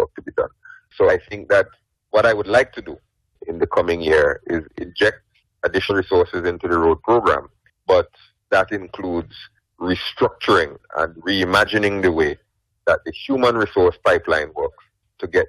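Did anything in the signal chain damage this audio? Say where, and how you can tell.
Yes. The damage sits at the codec stage, where the compressed stream is decoded. There is damaged data in the compressed stream at three points: 1.08 to 1.10 s, then 5.89 s and 10.76 s. Each is a very brief blip, no longer than about 20 ms. Some bytes in the encoded stream were wrong or missing. The decoder could not read those frames, lost sync, and had to hunt for the next valid frame header.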